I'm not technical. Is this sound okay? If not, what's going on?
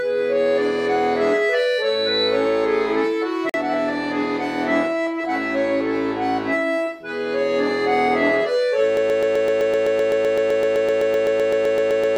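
No, there are three problems. At 1.57 s there's loudspeaker feedback squeal: the mic picks up its own speaker, so a 3.9 kHz whistle swells over roughly 0.7 s, gets about as loud as everything else, then stops at 2.42 s. At 3.49 s you'll hear a gap at a join of encoded pieces, a 46 ms dropout where two separately saved chunks were stuck together with a bit of silence left in. From 8.97 s to the end it turns into a broken-record loop, with the same 128 ms snippet repeating about 25 times back to back. Most likely the playback or stream stalled and kept resending its last bit, and the sound that should have been there is gone.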